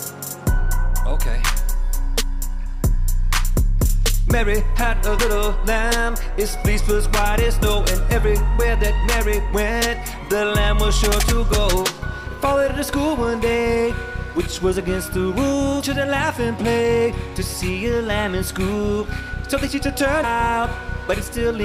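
Brief glitches, each under 20 ms, break into the audio at 2.65, 5.18, 12.26, 15.82 and 20.23 s. This is damaged data in a compressed stream: corrupted bytes make the decoder misread or reject frames, lose sync and hunt for the next valid frame header.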